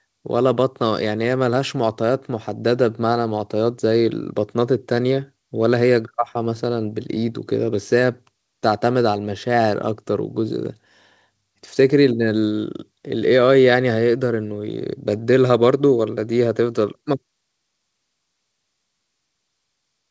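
No technical faults can be heard in this recording.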